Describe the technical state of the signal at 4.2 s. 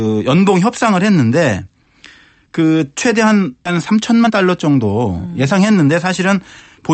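At 4.2 s the speech is inside a jitter buffer speed-up running from 3.75 to 5.89 s. To drain excess buffered delay, the receiver repeatedly cuts out pitch-period-sized slices, removing around a third of a second and playing about 12% fast. Unlike a resampling speed-up, the pitch stays put; only the pace sounds hurried.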